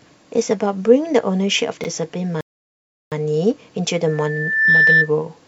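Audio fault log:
1.84 to 1.88 s, repeated buffer: a 40 ms slice of the speech plays, then plays once more straight after, so you get a quick stutter with a hard seam where the copy butts up against the original. What's happening is the output device didn't get fresh audio in time and just replayed what it already had. Because the repeated piece is so short it comes across as a tiny glitch, not an obvious echo of a syllable.
2.41 to 3.12 s, rebuffering stall: the speech drops out to silence for about 0.71 s and then picks up exactly where it left off. That's the player running dry on downloaded audio and waiting for more to arrive before carrying on. Nothing gets skipped, so the sentence stays intact, but the gap sits there as dead air and the whole clip runs that much longer.
4.07 to 5.11 s, loudspeaker feedback squeal: a steady tone at 1.8 kHz creeps in and swells over roughly 0.7 s into a squeal sitting about 10 dB above the speech. 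That's a mic hearing its own loudspeaker, where at that one frequency the loop has more gain than it loses, so the tone keeps feeding itself and growing until it tops out and dominates everything under it.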